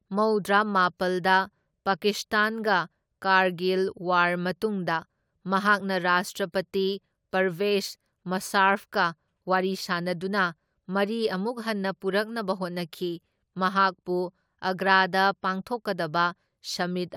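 Speech recording; no technical faults detected.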